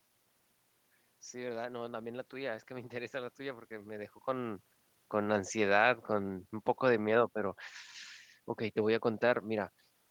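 Speech, with no technical faults to be heard.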